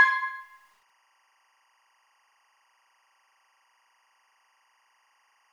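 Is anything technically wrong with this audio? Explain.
Yes. From 0.41 s to the end there is timecode bleed. Linear timecode from a nearby track or cable has leaked into the signal. Its square wave flips between pitches near 1 and 2 kHz, which points to 24-frame code. It sits roughly 40 dB down, a faint, steady chirping warble.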